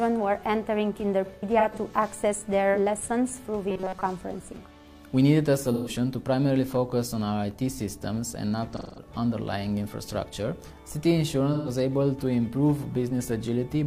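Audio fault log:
1.25–1.79 s, 5.73–5.89 s, 8.76–9.08 s, 11.53–11.69 s: AAC frame loss with concealment. Brief smeared, phasey patches where the decoder rebuilt roughly 130–210 ms of missing audio from earlier spectrum; the first is scattered, runs up to about 100 ms.
3.70–4.03 s: robotic sound, likely from repeated short buffers. A rigid metallic buzz at 188 Hz, since most of this stretch is a repeat of a roughly 5 ms chunk.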